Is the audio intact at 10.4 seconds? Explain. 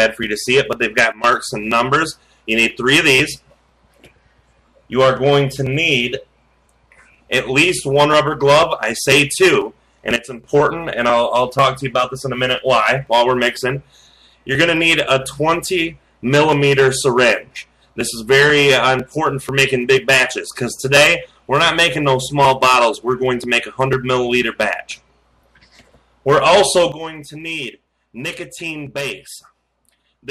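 No. A sudden gain jump drops the level by about 12 dB from 10.16 to 10.44 s, likely a gain change applied without a ramp. The sound and its background noise fall together in one abrupt step, unlike a gradual fade or a gated dropout.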